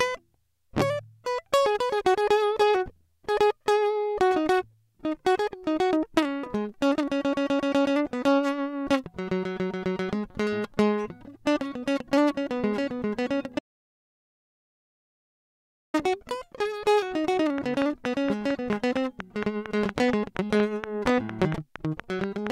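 From 13.59 to 15.94 s the music cuts to dead digital silence for 2.35 s, an audio dropout to silence, likely from a lost input link while recording continued. From 17.58 s to 22.48 s a train of clicks ticks steadily at 4.3 per second, around twenty sharp pops standing well above the music, likely from electrical interference.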